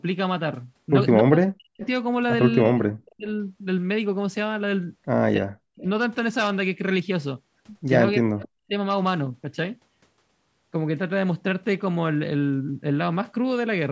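Speech suppressed in double talk hits this speech recording at 1.22–1.82, 2.68–3.27, 5.37–5.86 and 8.19–8.73 s, with the voice dipping by about 40 dB, likely because an echo canceller ducked it while the far side spoke. Echo leak appears at 1.81–1.88 and 8.39–8.43 s as a faint copy delayed 281 ms and about 25 dB down, likely loudspeaker pickup the canceller failed to remove.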